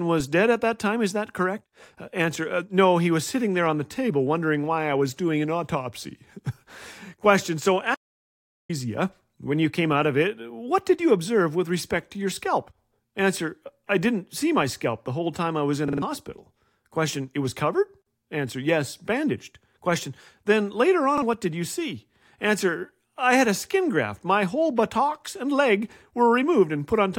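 At 7.95 s the speech cuts off abruptly and returns at 8.69 s. It is an audio dropout to silence lasting about 0.75 s. The gap is silence with no room tone, which sets it apart from a natural pause, where background noise would continue. The likely cause is a lost input, such as a disconnected device or failed link, while the recorder kept writing silence, so that stretch of speech is missing.

From 15.88 to 16.02 s, right after "time I was in", a repeated buffer produces a rapid stutter: one slice of about 46 ms plays three extra times with a hard join at each repeat. This fits a 2048-sample buffer and loses about 150 ms of new audio. At 21.18 to 21.22 s, just before "what did you see", a 46 ms slice repeats once, heard as a brief stutter. Unlike the dropout, these gaps are filled with repeated sound rather than silence.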